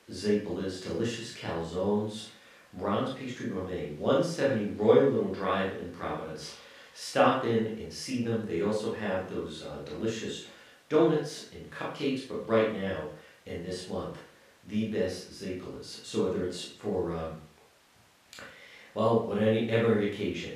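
Speech recording with no audible technical faults.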